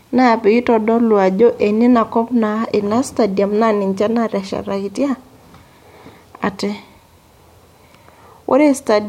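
Listening to the speech recording, nothing stood out as a technical problem.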